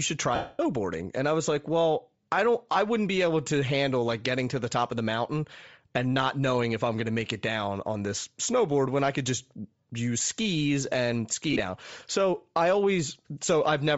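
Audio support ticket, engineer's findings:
Bluetooth LC3 compression, whole clip: speech carries a breathy, grainy edge, with the upper band thin and noise-filled. Likely LC3 at low rate, zeroing high spectrum and noise-filling it; damage fits roughly 32 kbps with 7.5 ms frames.

Lost LE Audio frames, 0.35–0.59 s after "should try": a 240 ms loss fading toward silence, consistent with about 32 frames concealed. Again at 11.53–11.60 s after "use skis and ski": 37.5 ms lost across 60 ms, longest gap around 30 ms. The decoder repeats the last spectrum with random signs, then fades.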